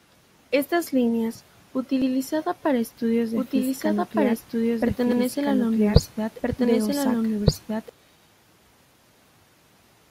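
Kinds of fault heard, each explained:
Overlapping chunks: Audio handled in 3 s blocks, each starting before the previous one ended, so about 100 ms plays twice at the joins near 2.02 s and 5.12 s. Unlike a doubled track, each repeat is a brief stutter, not a sustained copy.
Doubled audio track: From 3.35 s to 7.89 s a second full-band copy runs about one and a half seconds behind at roughly equal loudness, likely from a slower capture path. Unlike echo, it has no decay or room colour and starts and stops abruptly.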